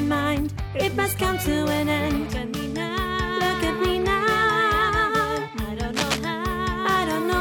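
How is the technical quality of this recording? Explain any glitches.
There's one glitch worth flagging: a burst of cable scratch noise from 5.93 to 6.19 s, a quarter-second of dense, ragged rustling sitting nearly as loud as the sound itself. It's likely a worn cable or connector being shifted, its contact resistance jumping around rapidly.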